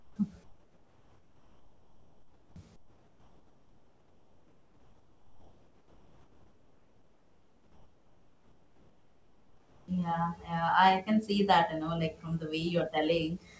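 From 0 to 0.16 s, 0.44 to 2.56 s and 2.76 to 9.88 s, comfort noise replaces the background. The speech pauses turn into steady, featureless hiss, about 13, 8 and 7 dB quieter, likely from discontinuous transmission. On a spectrogram these stretches are smooth, uniform bands with no texture, cut off above 8 kHz like the rest of the G.722 call audio.

At 9.84 to 9.88 s, the onset is clipped by the voice detector, likely because it reacted late. About 40 ms of the sound's beginning is missing, so the waveform jumps abruptly out of the flat noise floor.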